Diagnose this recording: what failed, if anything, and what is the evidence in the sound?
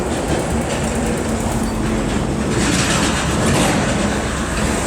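Clock drift between sender and receiver, at the network jitter buffer: the sending device's audio clock runs fast, by something around 4 percent, so samples arrive quicker than the receiver plays them out. The buffer keeps overfilling, and the receiver drops short pieces to keep up. That is the evidence in the sound: small skips and timing hiccups recur through the whole recording, at uneven intervals, with the sounds jumping forward slightly each time.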